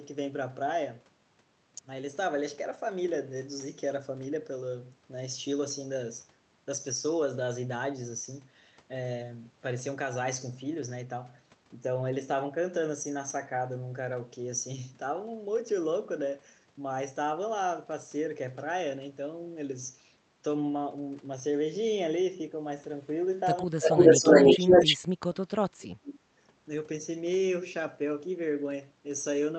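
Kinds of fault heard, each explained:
Speech suppressed in double talk, 23.64 to 24.01 s, 24.19 to 24.34 s and 24.57 to 26.3 s: with both ends talking at once, the canceller likely could not tell the local talker from loudspeaker echo and turned everything down. The sound dips by about 35 dB for roughly a fifth of a second, then briefly by about 10 dB, then for about a second and a half by about 35 dB.
Echo leak, 23.84 to 24.97 s: a copy of the sound returns 323 ms late, sitting roughly 15 dB under the talker, overlapping the first suppressed stretches. The loudspeaker side's echo canceller likely failed to remove everything its microphone picked up from the loudspeaker, so that residue was sent back down the Opus call path. The path itself shows only its normal coding noise and band limit at about 8 kHz.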